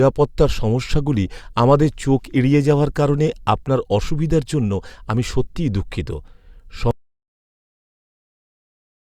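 Speech that suffers an audio dropout to silence at 6.91 s. From there to the end, the sound is silent with no room tone. A lost input is the likely cause.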